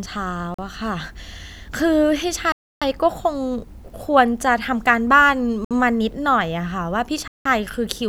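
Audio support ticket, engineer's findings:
Speech drops to dead silence four times: 0.54–0.59 s (42 ms), 2.52–2.82 s (294 ms), 5.65–5.71 s (61 ms), 7.28–7.46 s (176 ms). Likely a Bluetooth stall: interference delayed packets, the headphone buffer ran dry, and playback held until resends landed.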